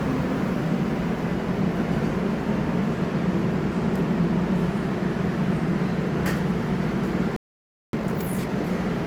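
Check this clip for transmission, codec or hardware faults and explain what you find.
Two related faults sit near the end: a playback stall followed by a time-compressed catch-up.

From 7.36 s to 7.93 s the sound cuts out abruptly in mid-flow and leaves about 0.57 s of dead silence before resuming. This is a playback stall, and the likely cause is the player's output running dry of data or its audio thread being blocked, so nothing reached the output until the supply recovered.

From 7.93 s to 8.49 s the returning sound is hurried, running at twice normal speed while keeping its normal pitch. This is time-compressed catch-up: to shed the backlog built up during the stall, the player drops short slices of the audio and cross-fades the remaining pieces together.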